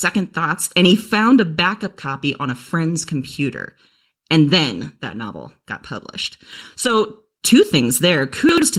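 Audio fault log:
Throughout: channel delay (comb filtering). One channel trails the other by roughly 0.7 ms, and when the two are summed to mono the shared content cancels at evenly spaced frequencies. The first notch sits around 700 Hz, with further notches at regular intervals above it. These fixed gaps in the spectrum give the speech a hollow, phasey quality that stays the same for the whole clip, whatever is being said.
4.81 s and 6.83–6.89 s: lost packet rebuilt from error correction. The first event falls just before "that novel got published" and lasts about 20 ms, which fits a single lost packet. The second comes just after "that novel got published", spans about 40 ms, and points to two lost packets. There is no silence at either point because the decoder filled in from low-bitrate backup copies. Those stretches sound rougher and noisier.
6.53–6.61 s and 8.49–8.62 s: chunks out of order. 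Each displaced block is about 42.7 ms long. The first, just after "that novel got published", plays one chunk later than it should. The second arrives two chunks late. Nothing is missing, but the sequence is scrambled, and the three hard joins around each moved block produce a brief garbled, jumbled jolt in the speech.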